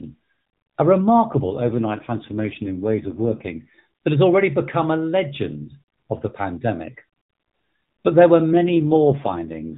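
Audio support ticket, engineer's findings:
AMR rate drop, 1.32–3.78 s: radio link weakens, network pushes AMR encoder to a lower mode, consistent with 12.2 kbps falling to about 4.75 kbps. Fewer pulses per subframe, so speech turns buzzy and synthetic. Same 4 kHz band, no gap. Recovers before "that has already become".

AMR rate drop, 8.52–9.77 s: same downswitch, starting after "there were" and lasting to clip end. Rougher, more robotic speech, no dropout. The band stays at the narrowband AMR-NB limit.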